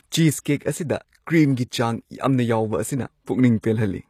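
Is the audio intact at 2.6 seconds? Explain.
No. At 2.6 seconds, as throughout the speech, the s sounds turn gritty and metallic, with nothing above 15 kHz. The treble is present rather than simply dulled, which points to HE-AAC compression as the likely cause. Its replicated upper bands don't line up harmonically with the true lower spectrum, which fits a low bitrate near 24 kbps.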